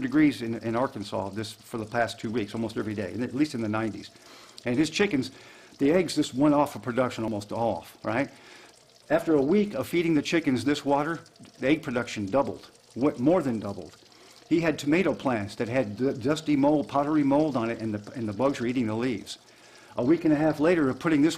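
At 6.24, 7.28 and 9.86 s the sound jumps ahead, losing a few tens of milliseconds each time, most at 7.28 s. A likely dropped buffer (overrun) joins the edges directly: a waveform discontinuity and a thin vertical broadband line on a spectrogram.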